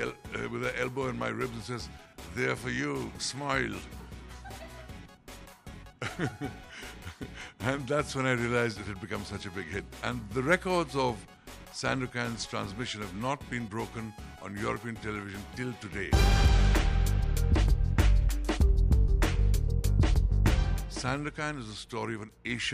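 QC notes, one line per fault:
No faults found in clip.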